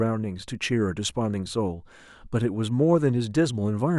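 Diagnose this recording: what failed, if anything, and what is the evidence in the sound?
Nothing in the signal chain failed: the speech signal stays continuous and intact, with nothing in the sound pointing to a problem at any stage between capture and playback.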